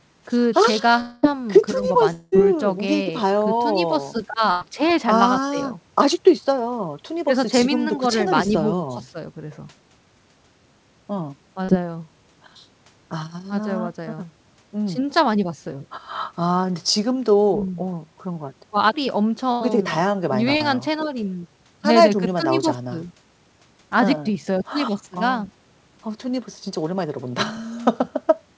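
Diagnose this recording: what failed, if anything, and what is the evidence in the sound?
Network stage, likely a long dropout in each case: no packets arrived for about 0.2 s at 1.00–1.25 s and again at 2.13–2.34 s. The receiver continued the last speech sound as a fading buzz or hiss across each gap, and the speech resumes with that stretch missing.

Network stage, short concealed packet loss: roughly 20 to 40 ms of speech failed to reach the decoder in time at 3.04–3.07 s, 11.65–11.70 s and 20.57–20.62 s. The receiver filled each hole by extending the preceding sound, heard as a brief smear or wobble, then blended back into real audio.

Network stage, burst of packet loss: consecutive packets were lost at 4.51–4.63 s (about 100 ms) and 19.52–19.63 s (about 80 ms). Concealment held the last sound and turned it down, giving a short decaying buzz or hiss, and the speech picks up further on within the G.722 call path's band, which stops at 8 kHz.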